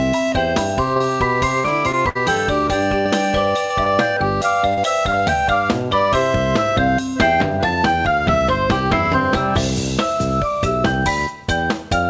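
From 0.94 to 2.17 s there is repeated packet loss, giving a robotic sound. Five separate holes fall within that 1.2 s stretch, the longest 60 ms, and about 12% of the span is patched rather than real. Each gap is filled by stretching the last sound, so a choppy texture builds up. The gaps come close together and recur, and that sets this apart from the isolated dropouts later in the clip.

At 3.65 to 3.72 s a single burst of packet loss hits. About 40 ms of sound never arrived. The receiver carried the last sound forward for roughly 47 ms while fading it, and the result is a brief held buzz or dying hiss before the audio picks up slightly further on. It is one continuous hole, with no recurring chop, and it ends in a fade-out.

Short concealed packet loss follows at 3.84 to 3.88 s, 4.74 to 4.79 s and 5.11 to 5.15 s. These are holes of 20 to 40 ms, bridged with extrapolated pitch or shaped noise and then blended back. 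They register as a quick smear or wobble, and a brief transient may drop out. They are too short for the held buzz of the burst and too sparse for the robotic chop.

Throughout, the call path's band limit shows: nothing above 8 kHz, which fits a wideband codec such as G.722.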